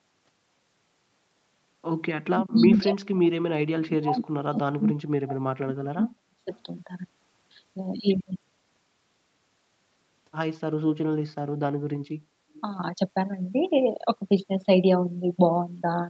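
From 2.12 to 6.53 s the speech is pulled down in pieces, dipping by about 40 dB at its deepest over roughly four seconds in total. This is speech suppressed in double talk, likely an echo canceller muting its own talker while both sides spoke. The waveform shows sudden collapsed stretches, and the spectrogram shows gaps across all bands.

At 12.56–12.6 s a brief echo leak appears, a faint copy delayed by 254 ms and about 30 dB below the speech, likely residual loudspeaker echo. It shows as a small smear trailing the earlier energy on the spectrogram, with nothing above the 8 kHz call bandwidth.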